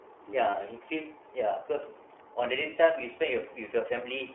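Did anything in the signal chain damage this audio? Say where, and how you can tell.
Yes. The iLBC codec runs throughout, at the codec stage: nothing sits above 3.4 kHz or below about 300 Hz, and the speech has a plainly rough, synthetic edge. Each 30 ms frame's excitation is coded independently, which fits the 13.33 kbps mode.

Lost iLBC frames at 0.51 s and 2.70 s, in the network stage, leave short buzzy held-vowel patches about 30 ms long, which fits a single dropped frame each. The decoder repeats the last pitch cycle with noise, then recovers at the next frame.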